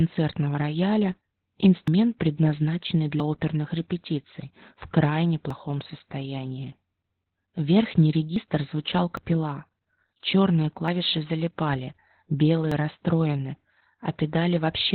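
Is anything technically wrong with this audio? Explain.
Yes, there are two problems.

Throughout, the speech carries heavy Opus voice compression. Nothing is present above about 4 kHz, so the band has been narrowed to narrowband. The voice sounds muffled, hoarse and slightly robotic, which points to the SILK linear-prediction coder running at a very low rate, around 8 kbps. At that rate the coder keeps only the basic shape of the voice and codes the excitation coarsely, so the fine detail and the top end are lost.

At 1.88, 3.2, 5.5, 8.36, 9.17, 10.88 and 12.72 s the speech jumps forward, with no gap of silence. Roughly 150 ms goes missing at 1.88 and 9.17 s, and about 40 ms at each of the others. The likely cause is a dropped buffer (overrun), where the capture side failed to read its samples before they were overwritten and the surviving audio on either side was spliced together.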